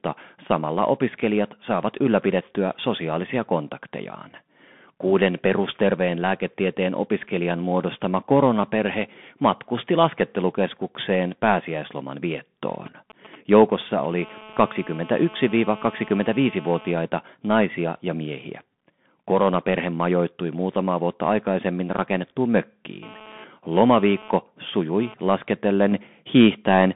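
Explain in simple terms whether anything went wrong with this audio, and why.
Bluetooth CVSD headset codec, throughout: the speech was squeezed through a narrowband headset link that sends only a crude up-or-down step for each tiny slice of sound. Nothing above about 3.8 kHz survives, so the speech sounds muffled and boxy, with a grainy hiss and roughened s sounds.

GSM signalling bursts, 12.87 to 14.21 s, right after "matkusti laskettelukeskukseen pääsiäisloman viettoon": a 2G phone nearby sent brief radio bursts while checking in with the network. The audio wiring picked these up as sound, giving a galloping dit-dit-dit of short buzzes.

GSM phone buzz, 14.22 to 16.91 s and 23.03 to 25.14 s: the nearby phone transmitted in pulses 217 times a second, and the circuitry turned them into a harsh, raspy 217 Hz buzz. The first stretch ends just before "naisia ja miehiä". It is steady, as during a call. 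The second starts after "muutamaa vuotta aikaisemmin rakennettuun" and comes and goes with data traffic.

Microphone volume stepped up, at 25.92 s: the calling software judged the microphone too quiet and raised its input level in one step. Voice and background suddenly jump louder together.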